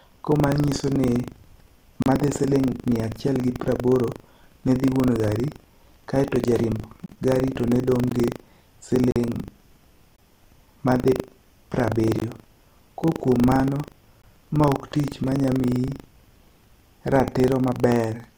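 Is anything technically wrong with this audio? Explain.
Yes, two faults are audible in this speech.

Throughout, a steady robotic rattle at 25 Hz rides on the speech and disappears in pauses. That is buffer tearing. The writing program and the hardware reader cross inside each buffer period, so a small slice of every buffer replays audio from roughly 70 ms earlier, joined hard on both sides.

From 9.11 to 9.16 s, the speech drops into a hard-edged silent hole about 49 ms long. This is a gap between stream segments. The time stamps of two adjacent 1-second segments leave a small gap, which the player fills with silence. No speech is lost.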